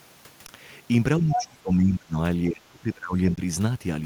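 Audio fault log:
0.47 s and 3.36 s: underrun with held sample. The output briefly goes flat for about 18 ms and then 15 ms as the converter holds its last value. Playback resumes where it stopped, so each gap ends softly.
1.20–2.17 s and 2.49–3.17 s: speech suppressed in double talk. The speech dips by up to about 25 dB, likely because the echo canceller mistook overlapping talk for echo and turned it down.
1.31–1.45 s: other side's voice leaking through. A second voice is audible about 5 dB below the speech, likely because the echo canceller left loudspeaker pickup in the microphone signal.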